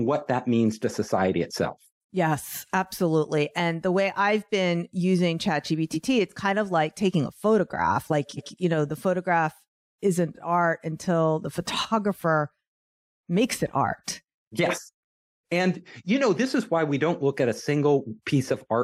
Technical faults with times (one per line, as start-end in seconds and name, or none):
5.93-6.06 repeated frames
8.36-8.53 repeated frames